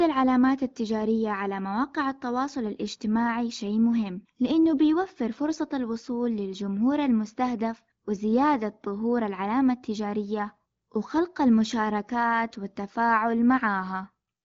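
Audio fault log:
No faults heard in this speech.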